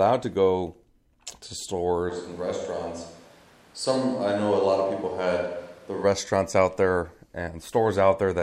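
At 2.11 s, just before "out there", the speech turns roomy and hollow, with thinner bass. The level drops about 5 dB, and room noise sits about 30 dB below the speech. This is a switch to a distant microphone, likely because the close one failed. It ends abruptly at 6.03 s.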